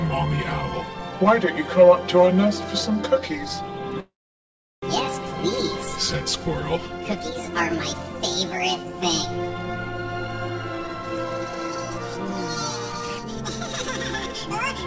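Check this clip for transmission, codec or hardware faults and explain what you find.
Two faults stand out, both from the receiving side of a call carried over G.722 at 64 kbps, whose band stops at 8 kHz.

From 4.00 to 4.84 s there is a call audio freeze, likely caused by packets stalling in transit until the jitter buffer ran dry. The last sound is stretched into a fading buzz or hiss, then about 0.73 s of silence, and the audio resumes exactly where it stopped. Unlike a dropout, nothing is lost; the stream is simply about 0.82 s later.

From 10.87 to 11.91 s a jitter buffer speed-up runs the sound at about 109% speed. The receiver clipped out repeated pitch-period-sized slices, about a tenth of a second in total, to drain excess buffered audio. It sounds hurried but keeps its pitch, unlike a sample-rate error, which would shift the pitch with the speed.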